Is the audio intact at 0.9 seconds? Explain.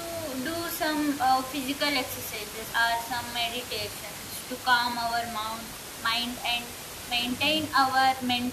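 Yes, the audio is intact at 0.9 seconds, with only the room's background noise sitting about 11 dB below the speech, which is part of the recording itself and not a fault.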